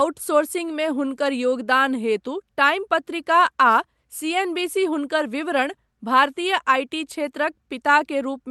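No technical faults can be heard in the speech. It has come through a call codec, and its top end stops at 12 kHz, which fits Opus at a moderate bitrate.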